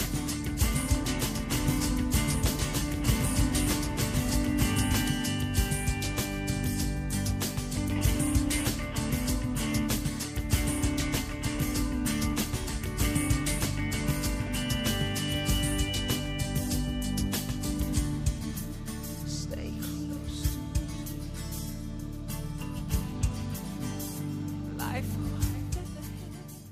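From the very start until 5.08 s, a doubled audio track is heard. A second copy of the sound trails about 1.5 seconds behind, at roughly the same level. It carries no reverb or room colour. It likely comes from a slower second capture path. The copy cuts off abruptly at 5.08 s.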